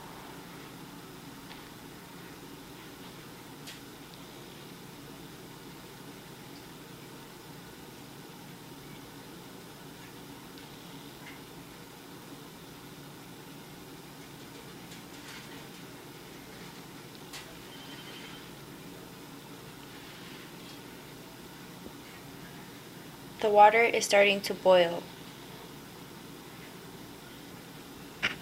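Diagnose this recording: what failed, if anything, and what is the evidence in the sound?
The capture path at the driver or buffer stage most likely lost data through dropped buffers (overrun): the program failed to collect samples before the hardware overwrote them. Each loss joins the audio directly across the gap with no silence, so the sound jumps ahead at 1.74 s, 15.57 s and 18.48 s. The skips are about 10 ms, about 30 ms and about 10 ms, so the one at 15.57 s is the longest.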